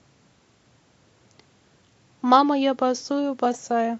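Near the end of the speech, from 3.52 to 3.58 s, a corrupt frame decoded fault produces a short chirp, squeak, blip or burst of noise. Damaged bits in the compressed stream were decoded as though valid, so misread gains and spectral codes placed energy at frequencies the speech never had. The error peaks around -25 dBFS, and its roughly 60 ms span fits about two consecutive damaged frames.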